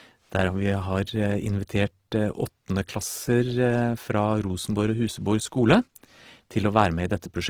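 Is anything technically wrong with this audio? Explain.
Yes. Opus compression damage runs throughout the speech, from start to finish, and is plainly audible. The likely cause is Opus in its music (CELT) mode starved of bits, at a rate that fits around 16 kbps. The encoder preserves each band's energy but fills thin bands by folding lower ones or with noise, so the speech turns grainy, rough and noisy rather than hollow or swirling, while the bandwidth stays full.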